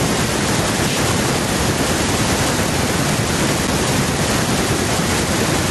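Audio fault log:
No faults detected.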